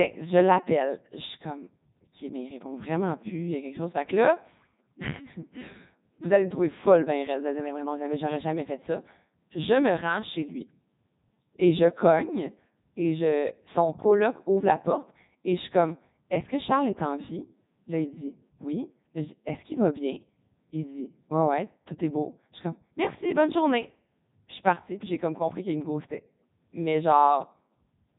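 From start to finish, the speech runs through the Codec 2 vocoder. Heavy damage is audible throughout. The voice is not carried as a waveform. Only pitch, voicing, loudness and a rough spectral shape survive, and the decoder rebuilds the voice from sine waves. The result sounds robotic and buzzy, with a synthetic edge. Nothing reaches above 3.8 kHz, so the top end is dull. The sound fits Codec 2 at its highest rate of 3.2 kbit/s.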